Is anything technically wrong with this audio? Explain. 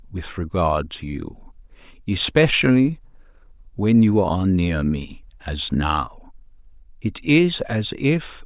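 No, nothing technically wrong can be heard here.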